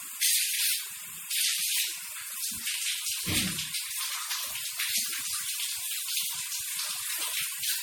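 A recording of sounds that was likely run through lossy MP3 encoding about four times in succession, the generation loss pattern, which fits a 64 kbit/s chain. Each re-encode quantises on a shifted frame grid, so the whole clip sounds swirly, hollow and smeared, with blurred attacks and nothing above about 20.9 kHz.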